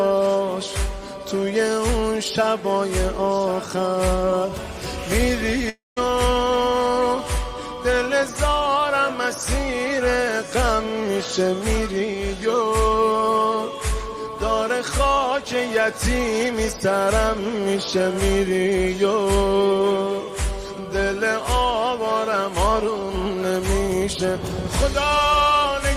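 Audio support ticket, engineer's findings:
Fading buzz into silence, 5.69–5.98 s; sound resumes with 0.28 s lost. Likely long network dropout: receiver concealment stretched the last sound, then muted.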